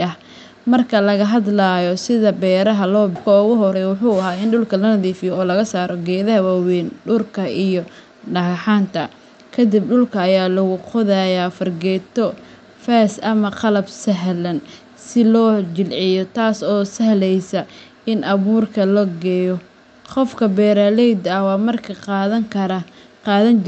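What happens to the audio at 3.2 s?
At 3.15 to 3.17 s there is a skip ahead: about a second of audio is discarded while later audio waits, so playback jumps forward with almost no gap. From 3.27 to 6.45 s a jitter buffer speed-up follows. To shed the extra delay, short pitch-period pieces totalling about 0.4 s are removed, so the speech runs at 111% speed without a change in pitch and sounds hurried.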